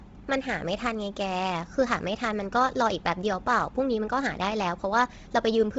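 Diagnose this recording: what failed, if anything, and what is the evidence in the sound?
Likely Bluetooth LC3 compression throughout, a codec-stage fault: the speech stops above 7.8 kHz, and its upper band is zeroed and refilled with grainy noise, fitting about 24 kbps.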